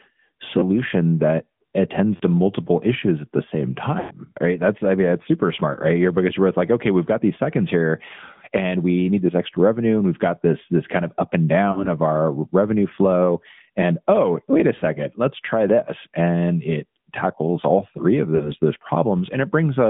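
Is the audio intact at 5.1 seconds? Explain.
No. At 5.1 seconds the speech carries AMR narrowband mobile codec damage, as it does throughout. Sound is confined to about 150 Hz to 3.5 kHz. Each frame rebuilds the voice from a vocal-tract model and sparse pulses. The result sounds plainly buzzy and synthetic, which fits an upper-rate mode near 10 kbps.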